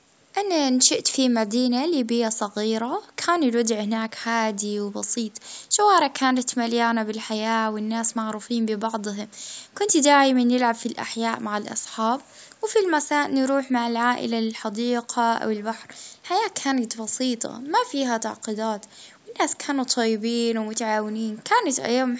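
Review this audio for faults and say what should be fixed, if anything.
Nothing here needs fixing; no faults are present.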